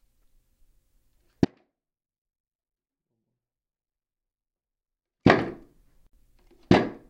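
Between 1.45 and 5.25 s, an audio dropout to a faint residue: sound abruptly drops about 30 dB, likely lost upstream, leaving a near-blank waveform.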